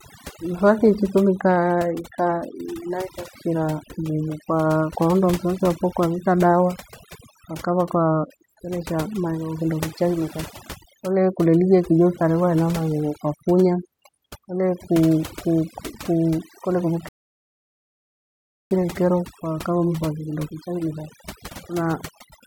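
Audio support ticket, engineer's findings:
Noise suppressor set far too aggressive, whole clip: overdone noise removal. Bands near the noise estimate pulled down or gated off, weak speech components included. Background drops, breaks up into twinkling specks.

Rebuffering stall, 17.09 to 18.71 s: playback buffer ran dry, player halted until more data arrived. Speech cuts to silence for about 1.62 s, then resumes exactly where it stopped. Nothing lost, 1.62 s added to playback.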